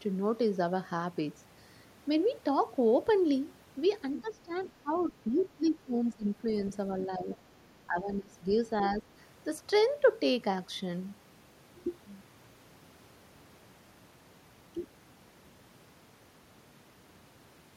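Other side's voice leaking through appears from 4.17 to 5.43 s, and again briefly from 6.6 to 6.72 s, in this speech clip. A second, fainter voice sits roughly 20 dB below the talker in the first stretch and around 25 dB below in the second. The likely cause is that the far end was playing over a loudspeaker and the echo canceller left part of it in the microphone signal. Speech suppressed in double talk overlaps this, from 4.21 to 6.39 s and from 7.06 to 9.05 s. The talker's level dips by as much as about 15 dB, in pieces totalling around a second in the first span and about 0.7 s in the second. This likely happens because both sides spoke at once and the canceller, unable to separate its own talker from the echo, turned everything down.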